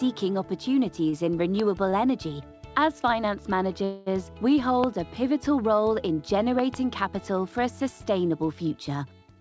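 At 1.10 s and again at 1.90 s there's a short stall from a late packet. The jitter buffer ran dry, so the last bit of sound gets held for roughly 20 to 25 ms, a slight smeared hiccup, and then it picks up right where it left off with nothing lost. Between those, from 1.60 to 1.62 s, a loud pop jumps out about 10 dB over the audio, a sharp click riding on top while the sound carries on underneath. It's likely an electrical step or driver glitch. From 3.84 to 4.08 s comes a call audio freeze. The last sound is stretched into a fading buzz for about 220 ms, likely because packets were held up in transit, and then the audio resumes from the same point, so it's a gap rather than a dropout. Two more loud pops follow, likely from the same kind of voltage spike: a single one at 4.84 to 4.86 s, about 15 dB over the signal, and a double pop between 6.59 and 6.76 s, also about 15 dB up. All of this sits on the call path's band limit, with nothing above 8 kHz, which fits G.722 at 64 kbps.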